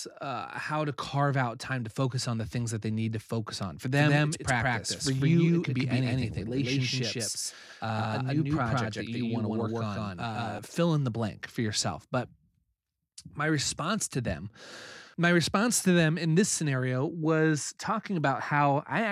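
From 3.97 s to 10.59 s, just before "fill in the blank", a doubled audio track appears: an equally loud full-band copy trails around 150 ms behind, likely from a slower second capture path or an edit holding two copies. Spectrograms show every feature repeated at that offset, starting and stopping abruptly.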